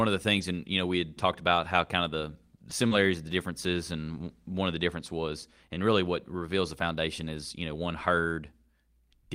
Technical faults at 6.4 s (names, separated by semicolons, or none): none